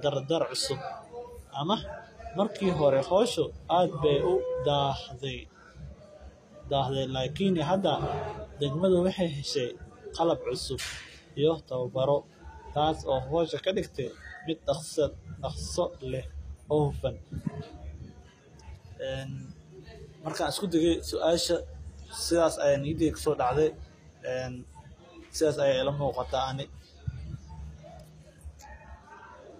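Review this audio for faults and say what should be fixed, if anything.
Throughout the speech, the upper treble sounds synthetic. S sounds come out gritty and lispy, and nothing is present above 14.9 kHz. This is likely HE-AAC compression at a low bitrate, around 24 kbps, with copied-up bands misaligned against the true harmonics. To prevent it, encode at a higher bitrate with plain AAC or a lossless format.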